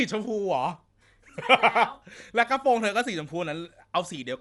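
From start to finish, the speech sounds dull and rough. Nothing is heard above 11.5 kHz, so the top of the band is simply gone. Within the band, a grainy, fluttering noise rides around the tonal parts of the sound. The likely cause is Dolby Digital compression at a low bitrate, perhaps around 64 kbps. The encoder narrowed the band and left many frequency lines without detail. The decoder then filled those lines with noise.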